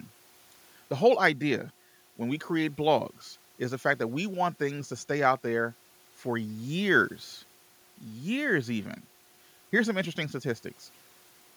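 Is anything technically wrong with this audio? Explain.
No, nothing is technically wrong: the only thing beneath the speech is the room's own background noise, sitting about 35 dB down and belonging to the recording rather than the system.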